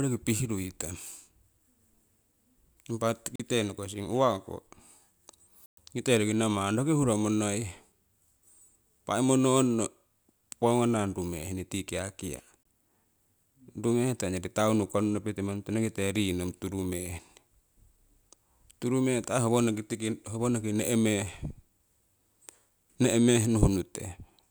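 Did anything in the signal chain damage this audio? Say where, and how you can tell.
Yes, at the wireless playback link: speech cuts to silence at 3.36 s, before "nokosing uwako" (40 ms), at 5.66 s (114 ms) and at 12.63 s, after "tii kiakia" (23 ms). These are likely Bluetooth stalls, the headphone buffer running dry while resent packets arrive. The waveform shows flat gaps; the spectrogram shows full-band blank columns.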